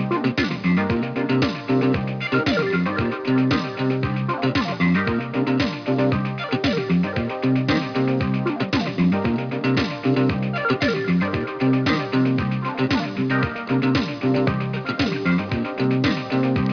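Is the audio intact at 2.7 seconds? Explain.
No. At 2.7 seconds you're hearing aliasing, and it runs through the whole clip. It sounds like the audio was taken down from 44.1 kHz to an 11 kHz rate without a proper anti-alias filter, so anything above the 5.5 kHz folding point bounced back down as unrelated, wrong-pitched tones. Those sit maybe 20 dB under the real signal, giving the highs a gritty, metallic edge, with energy piled right up to the band edge.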